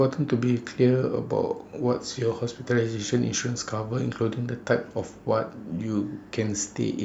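Listening to this speech recording, nothing stood out as a technical problem.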